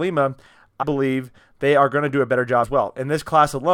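Compressed frames skipped twice in this speech: the decoder lost whole blocks of coded audio, so playback leaps forward with a gap that points to frames of about 23 ms. At 0.82 to 0.84 s roughly seven frames vanish, about 150 ms of speech gone. At 2.63 to 2.65 s, right after "to do a better", about four frames drop, near 100 ms. At each join the speech jumps ahead by the missing audio.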